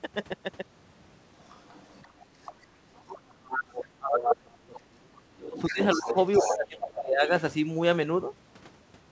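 A second, quieter voice sits under the talker from 1.4 to 2.26 s and again from 2.45 to 2.66 s, at first very faint, then clearly stronger. This is the other side's voice leaking through, likely loudspeaker echo that the canceller failed to remove. Unlike suppression, it adds a voice rather than taking one away. Further scraps follow at 2.97 to 3.02 s and 3.52 to 3.56 s, then longer, louder stretches from 5.46 to 6.15 s and 6.33 to 6.78 s, the last close to the talker's own level.

From 2.84 to 6.15 s, and again from 6.41 to 7.3 s, the talker's own voice is pushed down, by as much as about 35 dB and then about 25 dB, while the far side plays on the loudspeaker. That is speech suppressed in double talk: the canceller likely could not tell the talker from the echo and turned both down. Here the fault takes the talker away, dropping it, rather than adding a voice.

Throughout, the band stops at 8 kHz, which fits a wideband call codec such as G.722 at 64 kbps.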